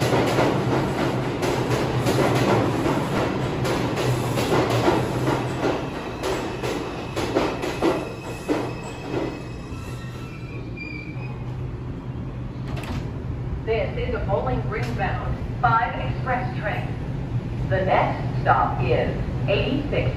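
At 3.18 s there is a brief blip from damaged data in the compressed stream. Some of the data there is wrong. The decoder misreads that frame, loses sync, and must find the next frame header. The result is a tiny glitch.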